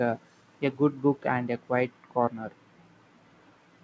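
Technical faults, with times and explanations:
No faults found; the speech carries the band limit of a wideband call path, with nothing above 8 kHz, which fits G.722 at 64 kbps.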